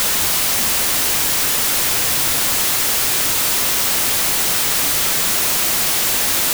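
From start to finish the recording has a wrong sample width fault. The sound points to 32-bit integer samples being read back as 16-bit. Each original sample splits into two values. The upper half carries the real signal's top bits, and the lower half becomes near-random noise. The speech sits buried under loud hiss, and the doubled sample count plays it at 0.5× speed, an octave low.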